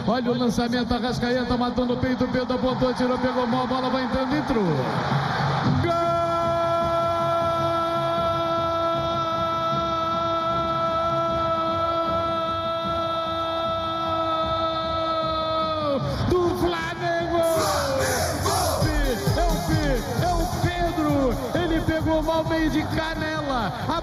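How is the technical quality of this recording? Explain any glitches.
There's one real problem, and it runs the whole way through: channel delay (comb filtering). One side lags by roughly a fifth of a millisecond, so the mono sum cancels at evenly spaced notches starting around 3 kHz, leaving everything hollow and phasey.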